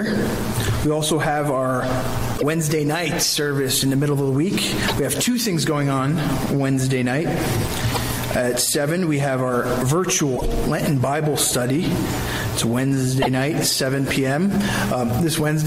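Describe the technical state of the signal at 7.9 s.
At 7.9 s the signal is hit by damaged data in a compressed stream, from 7.89 to 7.97 s. Corrupted bytes make the decoder misread the frames there and lose sync until it locks onto the next frame header, producing a brief chirp, squawk, click or short hole.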